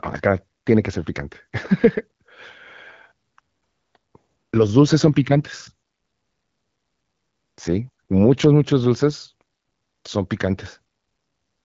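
Nothing stood out on listening to this speech, which comes across as normal AMR wideband (HD Voice) audio at 12.65 kbit/s with its top end stopping around 7.5 kHz.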